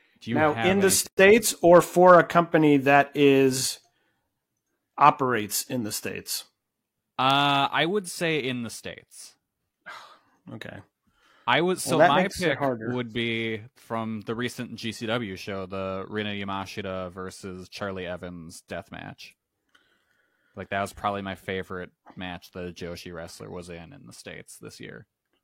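Speech with a gap at a join of encoded pieces from 1.07 to 1.19 s, between "now in the" and "or for a company": a gap of about 120 ms, left by encoder start delay and last-frame padding. Unlike a dropout, the speech resumes exactly where it stopped, with smeared edges.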